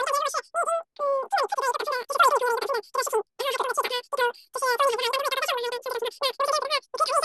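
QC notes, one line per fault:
Throughout: wrong sample rate, speech recorded at 16 kHz plays at 48 kHz unconverted, so it runs three times fast and about 19 semitones high.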